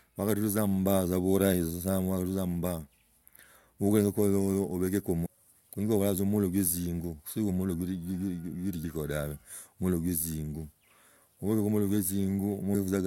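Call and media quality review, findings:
Damaged data in compressed stream: short glitches at 5.25–5.27 s, 8.83 s and 12.74 s. Decoder misreads corrupt frames, resyncs. Spectrogram shows brief broadband vertical streaks; waveform shows abrupt discontinuities.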